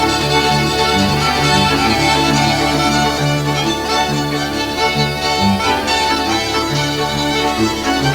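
From the start to 3.18 s, a doubled audio track: a second full-band copy trails about half a second behind, roughly 5 dB lower, likely from a slower capture path, then cuts off abruptly.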